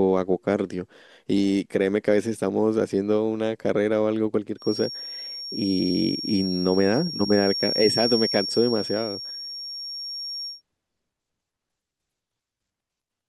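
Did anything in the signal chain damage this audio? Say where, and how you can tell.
Yes. From 4.56 s to 10.63 s there is a feedback whistle, most likely from the loudspeaker's output leaking back into the microphone with loop gain sitting just at the point of oscillation. One frequency near 5.5 kHz keeps recirculating without building up. This produces a thin, steady whistle under the speech, roughly 10 dB below it, swelling and fading slowly in level, then ending at 10.63 s.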